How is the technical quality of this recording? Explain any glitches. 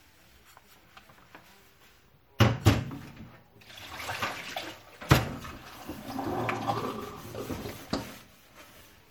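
Technical quality is poor, with audible codec damage throughout. The whole clip carries MP3 compression artefacts. Faint detail flickers watery. This likely comes from MP3 encoding, and the damage fits a low rate around 64 kbps. At 2.39 s there is pre-echo. A brief hiss of about 15 ms leads into a sharp attack. The codec spread its noise across the block before the hit, softening it.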